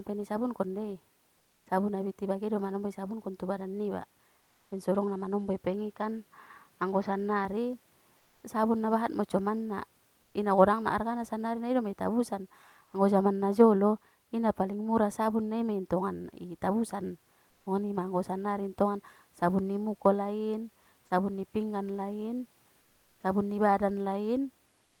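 From 1.38 to 1.66 s, between "pe na isabunkon dei" and "abit i bage do", the room background gives way to a flat, featureless hiss about 3 dB quieter. This is comfort noise in place of the background, likely from discontinuous transmission filling the pause with synthetic noise.

From 5.67 to 7.45 s, right after "baen sodong na manombo", the sound turns dull with nothing above 6.5 kHz, at much the same level and with no gap. The input likely switched to a poorer device.

The same smooth stand-in noise returns for 120 ms at 10.22 s (about 2 dB quieter), for 90 ms at 12.84 s between "sannari na idoma itabusan" and "anggo jaman na jolo" (about 3 dB louder), and for 430 ms from 22.80 to 23.23 s (about 2 dB quieter).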